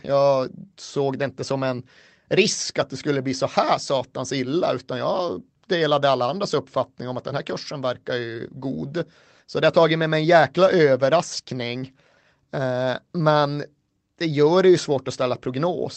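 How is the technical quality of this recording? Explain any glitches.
One glitch stands out, a single click at 14.6 s, heard in speech whose top end stops near 8 kHz, as a call codec would leave it. The click falls between "men det gör" and "det ju" and is dropped samples, likely about one sample missing. The waveform jumps abruptly to a later value, producing one brief, sharp tick with no audible gap.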